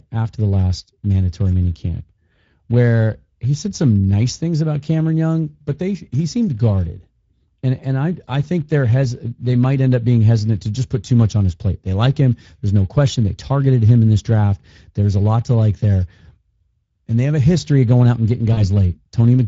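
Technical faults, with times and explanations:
throughout: Speex codec. The damage is plainly audible across the whole clip. Speex is a CELP speech codec. It models the vocal tract with a short filter and spends its remaining bits on an excitation signal that drives that filter. Here the excitation is coded coarsely, and that roughness is plainly audible. The sound fits a Speex mode running at around 16.8 kbps, a middle setting rather than one of the starved low ones.
18.53 to 18.63 s: VoIP packet loss concealed by the speech codec. Right after "going out and getting", about 40 ms of audio goes missing, which fits two lost 20 ms frames. The decoder fills the gap by repeating its last pitch and filter at falling gain. That gives a brief smeared stretch instead of real speech. Each frame builds on the one before, so the disturbance carries on to about 18.63 s, past the gap itself.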